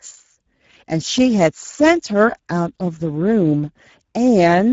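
From start to finish the speech carries Speex codec damage, and it's plainly audible. Speex is a CELP coder, and here it's running lean, which fits a bitrate of around 10 kbps. At that level there aren't many bits left for the excitation signal, so the voice comes out noisy and hoarse instead of clean. Nothing reaches above 7.6 kHz either, which adds to that boxed-in, old game-chat quality.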